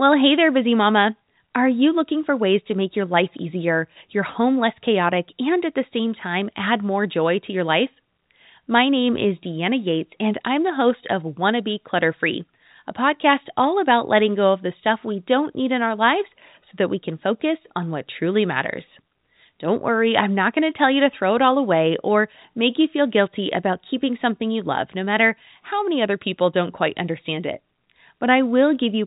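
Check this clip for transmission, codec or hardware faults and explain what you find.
No transmission, codec or hardware faults turn up in this clip.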